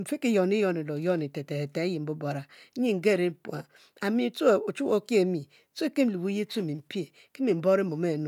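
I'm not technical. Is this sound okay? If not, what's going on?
Yes, it's fine: nothing here sounds broken, so you've got nothing to worry about.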